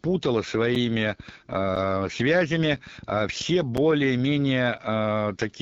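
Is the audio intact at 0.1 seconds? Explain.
No. At 0.1 s the speech is already running through the AMR wideband (HD Voice) codec, which affects the whole clip. It models the voice up to 6.4 kHz and fills the top band with shaped noise. The rough, raspy grain fits a low rate like 8.85 kbit/s. Unlike narrowband telephone coding, the upper band remains.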